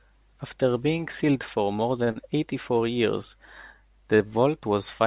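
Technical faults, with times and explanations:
2.04–2.09 s, short stall from a late packet: a packet arrived late, so the receiver held the last sound for 34 ms. Nothing is lost, but the sound drags briefly.
2.11–2.18 s, short concealed packet loss: about 40 ms of audio never arrived. The receiver extended the preceding sound to bridge the gap, leaving a brief smear or wobble.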